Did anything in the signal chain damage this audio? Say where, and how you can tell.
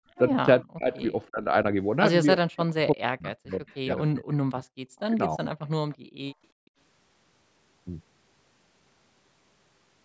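Yes, the call processing stage damaged it. The echo canceller caused gated background at 0.00–0.16 s, 5.97–6.21 s and 6.52–6.77 s. The room noise falls about 26–31 dB, which shows as gaps in the waveform's noise floor.

The speech is suppressed at 0.61–1.51 s and 2.36–5.41 s, dropping roughly 40 dB in pieces. This is likely the canceller ducking during double talk, and it shows as chopped, hollowed spectrogram stretches.

Faint echo leak appears at 3.52–3.78 s, 5.92–5.97 s and 6.28–6.34 s. These are delayed copies about 342 ms late, roughly 30–40 dB down, likely loudspeaker pickup escaping cancellation, and they show as ghost traces on the spectrogram.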